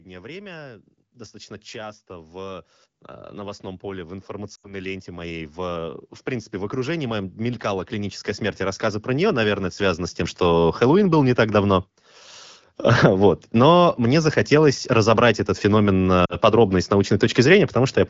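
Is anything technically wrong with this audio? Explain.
Yes, there are two kinds of fault.

Automatic gain rising occurs from 0.05 to 2.71 s and again from 3.31 to 12.28 s. The automatic gain control judged the input too quiet and raised its gain step by step. The first rise adds about 5 dB. The second is much larger, about 19 dB over roughly nine seconds. The speech and the background noise swell together, so the level climbs steadily rather than jumping.

Lost AMR speech frames occur at 4.55 to 4.74 s and 16.25 to 16.36 s. Frames failed their checksum in transmission, so the decoder repeated the last good pitch and vocal tract settings with falling gain. The first gap, about 80 ms, points to four lost frames. The speech drops to near silence before returning weak. The second gap, about 40 ms, falls between "захотелось разобрать этот феномен" and "подробно и с" and drops the voice to near silence before it returns weak. 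The wideband codec's light coding texture, which fits a rate around 12.65 kbit/s, is otherwise working normally.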